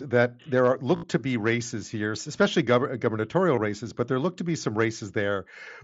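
At 0.96 to 1.04 s, concealed Bluetooth headset packet loss replaces about 70 ms of speech with a repeated short stretch of earlier waveform, heard as a buzzy held tone ending in a slight warble. A brief loss at 3.56 s replaces about 15 ms.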